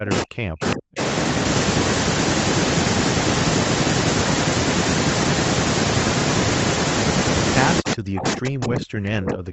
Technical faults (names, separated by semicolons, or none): speech suppressed in double talk